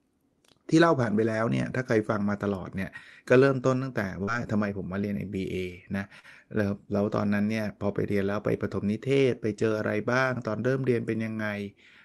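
At 4.23 to 4.30 s and again at 6.19 to 6.26 s, there is short concealed packet loss. About 40 ms of audio failed to arrive in time. The decoder extended the preceding speech to cover each gap. Both spots sound like a brief smear.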